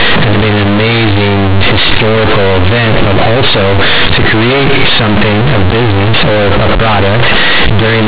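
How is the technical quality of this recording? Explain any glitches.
Poor: the whole recording is badly distorted. Throughout, companded audio read as linear: mu-law bytes are played back as plain 8-bit samples without expansion, giving loud buzzy distortion, heavy noise in pauses, a flattened, clipped-looking waveform and broadband smearing on a spectrogram. The underlying G.711 telephone coding's 4 kHz limit remains visible.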